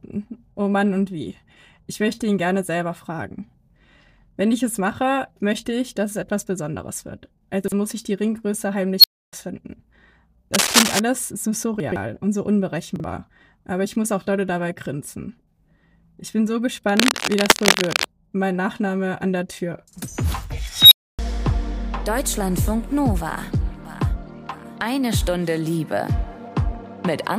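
At 7.64 s a short stretch of the audio comes out jumbled. These are chunks out of order: a 40 ms chunk plays one chunk late. Nothing is missing, which separates it from a dropout, where a gap opens.

At 8.99 s an unstable filter runs away. A tone of about 4 kHz swells within 47 ms, clips, then cuts to roughly 0.29 s of silence. That sequence of growth, clipping and sudden silence distinguishes it from acoustic feedback, which keeps ringing.

From 10.54 to 10.99 s dense, uneven scratching rides about 5 dB over the sound. This cable scratch noise likely comes from a worn cable or connector being moved. Its irregular bursts set it apart from steady hiss.

At 11.8 s the chunks are out of order again, with a 40 ms chunk arriving three chunks late, so the jumble lasts longer. At 12.96 s a chunk plays one late.

From 16.89 to 18.05 s the same irregular scratching returns.

At 20.76 s the filter runs away again. 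This time the tone near 4 kHz builds more slowly, over 148 ms, before about 0.28 s of silence.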